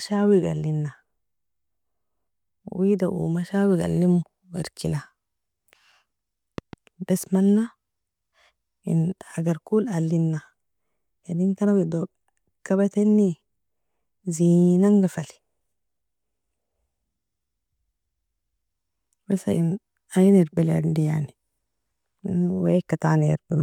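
At 6.58 to 6.75 s a loud pop breaks in, heard as two sharp thumps somewhat louder than the speech, which carries on unbroken beneath them. That continuity separates it from a dropout. The likely cause is a voltage spike from a plug, switch or static discharge.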